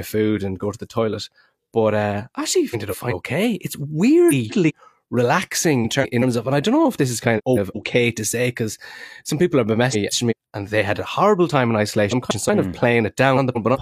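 Frames out of order occur at 2.70–3.13, 4.29–4.72, 5.84–6.23, 7.37–7.76, 9.92–10.33, 12.11–12.50 and 13.36–13.77 s. Two neighbouring blocks of about 190 ms each were swapped, which fits runs of four frames. Each stretch plays halves exchanged. The speech flutters garbled.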